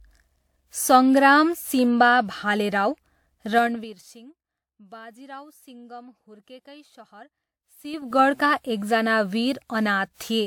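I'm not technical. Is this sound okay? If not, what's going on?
No. All the way through, the speech sounds swirly, hollow and smeared, with the starts of sounds blurred. That is likely generation loss: the recording was compressed and saved again several times, and each pass added a little more damage.

From 3.50 to 4.18 s the volume drops sharply, and from 7.77 to 8.19 s it rises again. Both times you hear a fine ticking or zipping. This is zipper noise: the volume moves in about ten abrupt little jumps a second instead of gliding, and each jump clicks.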